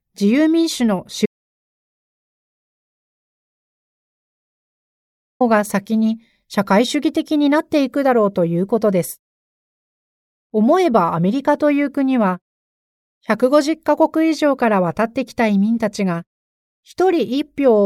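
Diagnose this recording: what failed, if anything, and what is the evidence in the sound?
At 1.26 s the speech cuts off mid-flow into dead silence, with no room tone at all, and returns abruptly at 5.41 s, losing about 4.1 s. This audio dropout to silence likely reflects a lost input link upstream, with the recorder writing silence.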